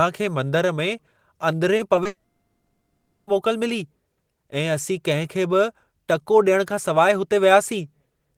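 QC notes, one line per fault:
1.77–1.81 s, 1.95–1.99 s and 2.03–2.07 s, short concealed packet loss: three brief smears land in quick succession, each replacing about 20 ms of audio that arrived too late to decode. The receiver bridged each hole by extending the preceding sound, copying its pitch period when voiced or shaped noise when not, then crossfaded back. On a spectrogram, look for short patches of smoothed, repeated harmonics or blurred noise. The waveform shows repeated cycles or smoothed noise at each joint.
2.07–3.29 s, long network dropout: right after the third glitch, about 1.2 s of audio is missing and never returns. The concealment first stretches the last sound into a buzz or hiss that decays, and roughly the final 0.37 s before recovery is near-silent. The likely cause is a network outage. On a spectrogram, harmonics blur and fade into an empty band. The waveform shows a tapering envelope, then a flat line before the sound resumes.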